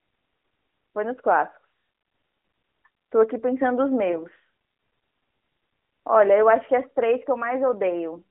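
At 4.12 to 4.26 s, a lost AMR speech frame leaves a brief warbling dip as the decoder replays the previous frame with falling gain. The spectrogram shows a smeared, fading patch.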